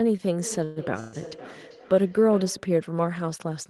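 From 0.42 s to 2.80 s, each word returns as a thin, ringing repeat roughly every 0.4 s, up to about 16 dB below the speech. This feedback echo between two devices comes from a second device nearby replaying the call, which its microphone then resends.

At 0.64 s to 0.79 s and again at 1.00 s to 1.16 s, the sound stalls into a brief fading buzz, about 0.12 s each, then resumes with nothing lost. These call audio freezes likely come from delayed packets emptying the jitter buffer.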